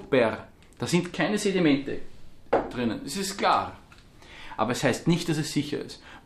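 Nothing in the signal points to a technical fault at any point.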